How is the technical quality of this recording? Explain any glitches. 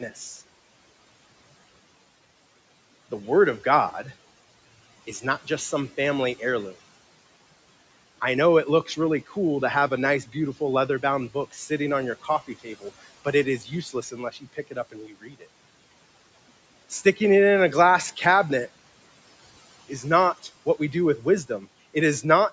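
The main glitch is speech cut by the noise suppressor, four times. The call processing's band limit tops out at 8 kHz, and the room noise sits about 22 dB below the speech.

Speech cut by the noise suppressor occurs at 0.1–0.41 s, at 8.86–9.35 s between "I know it" and "to have", from 9.9 s to 15.47 s after "to have" (roughly 1.5 s affected), and at 19.89–22.24 s. The suppressor mistook quiet speech for background and pulled it down by about 11, 14, 17 and 9 dB respectively, so syllables sound swallowed. On a waveform these show as sudden dips in the envelope. On a spectrogram they appear as faded, gapped patches within the speech harmonics.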